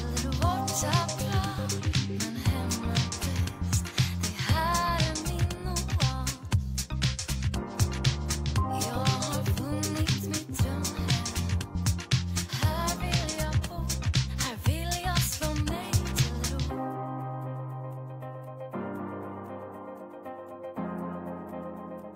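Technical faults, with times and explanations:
No technical faults can be heard anywhere in the recording.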